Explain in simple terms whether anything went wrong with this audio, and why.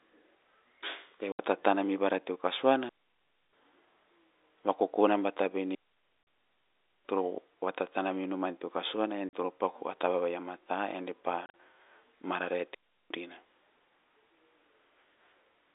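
Yes, two things went wrong. First, packet loss filled with silence: bits of the speech went missing in transit and were replaced by sharp-edged gaps at 1.32 s (70 ms), 6.23 s (40 ms), 9.29 s just before "toro paku a" (40 ms), and 11.46 to 11.54 s, scattered over 80 ms. The gap lengths suggest 10 ms packets.

Second, a digital wireless dropout: the wireless link lost too much data, so the receiver quickly faded to near silence, with no noise burst. This happens from 2.89 to 3.53 s, 5.75 to 7.05 s, and 12.75 to 13.10 s. Throughout, the sound has the narrow, phone-line quality of telephone coding.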